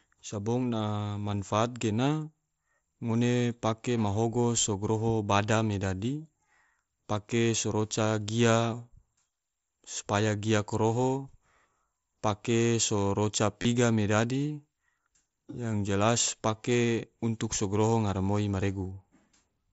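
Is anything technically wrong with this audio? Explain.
Yes, there is concealed Bluetooth headset packet loss in two places in this speech, carried over the mSBC headset codec whose wideband sound is capped near 8 kHz. At 0.78 s, just before "manfaat gena", about 15 ms went missing, and at 13.62 to 13.65 s a gap of about 22.5 ms did too. The receiver filled each hole by repeating the closest-matching recent stretch of waveform, so the gaps are bridged by a brief buzzy, held tone with a slight warble as real audio resumes. On a waveform the filled section looks like a short run of near-identical repeating cycles, and a spectrogram shows flat, steady harmonic lines there instead of moving speech formants.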